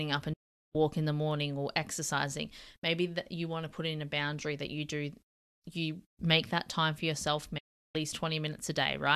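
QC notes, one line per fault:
0.33 to 0.75 s, digital broadcast dropout: the speech fades out over about 8 ms and goes silent for roughly 0.41 s before "in the morning or". The receiver lost the signal or got corrupted frames and muted, so that stretch is just gone.
7.58 to 7.95 s, digital broadcast dropout: same quick fade to a roughly 0.36 s hole right after "that time for yourself". It's another receiver mute, and nothing sent during it comes back.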